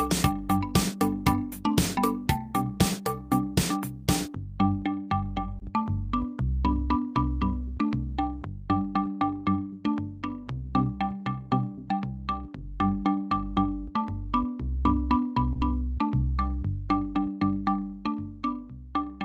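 At 5.59 to 5.63 s and again at 15.53 to 15.57 s there is short concealed packet loss: about 20 ms of audio failed to arrive in time each time, and the receiver papered over it with roughly 16 ms and 18 ms of extrapolated signal before crossfading back. Each gap is heard as a brief smear or wobble. On a spectrogram, harmonics blur or flatten into noise for a sliver of time, and the waveform shows a slightly too-regular repeated cycle at the seam.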